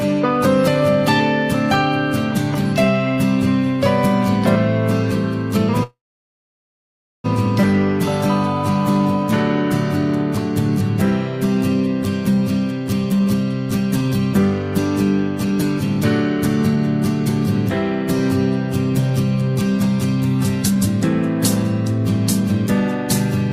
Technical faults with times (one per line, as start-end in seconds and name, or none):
5.83-7.26 call audio freeze
13.12-17.70 jitter buffer speed-up
19.10-22.65 jitter buffer speed-up